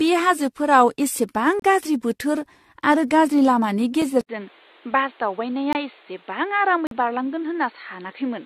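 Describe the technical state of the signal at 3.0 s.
Generation loss at 3.0 s, present throughout the clip: the speech sounds swirly, hollow and smeared, with blurred consonant attacks and nothing above 14 kHz. This is likely from repeated AAC-LC re-encoding, around seven passes at a rate that fits 64 kbit/s, each requantising on a shifted frame grid so noise and spectral holes accumulate.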